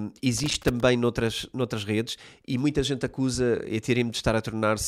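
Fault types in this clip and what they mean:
Loose connector crackle: a worn or dirty contact somewhere in the cable run is making and breaking as it shifts, so the signal keeps cutting in and out and any DC on the line is turned into pops. In this speech clip it shows up as an irregular burst of crackling and scratching from about 0.38 to 0.80 s, right before "noutras noutras redes e".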